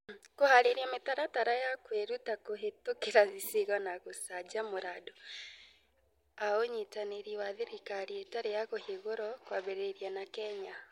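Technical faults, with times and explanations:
Nothing stood out on listening to this speech recording.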